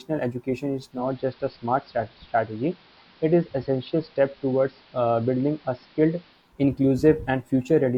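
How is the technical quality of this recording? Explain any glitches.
The recording has one clear fault. Digital radio blending to analogue runs from 0.83 to 6.55 s. The receiver lost digital and cross-faded over about 278 ms to AM, cutting the treble, dropping level about 2 dB, and bringing up hiss roughly 30 dB below the speech.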